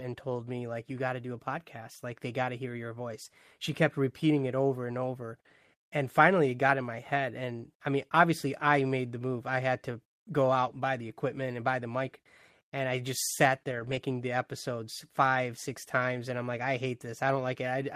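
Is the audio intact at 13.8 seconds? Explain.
No. From 13.71 to 13.97 s, several separate lost packets, about seven, were covered by a lost packet rebuilt from error correction. Each following packet carried a low-bitrate backup of the missing one, and the decoder played those backups in place of the originals, rebuilding about 140 ms of audio. There is no silence or dropout, but through that stretch the speech turns coarser and noisier than the surrounding audio.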